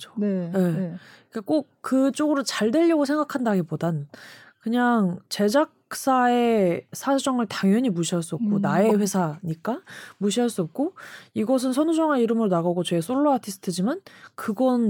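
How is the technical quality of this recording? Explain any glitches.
One glitch stands out in the speech: a corrupt frame decoded at about 8.9 s. Damaged bits in a single compressed frame were played back anyway, so misread gains and codes scatter energy to wrong frequencies. The result is a loud glitch, peaking around -5 dBFS, lasting one frame. Unlike a dropout or plain click, it is a burst of misplaced sound rather than a step.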